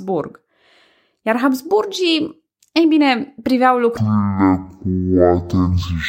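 From 3.97 s to the end, a stereo read as mono fault takes over: the interleaved left and right samples are treated as one channel, so the speech slows to half speed, drops a full octave (12 semitones), and gains a fainter mirrored copy in the upper spectrum.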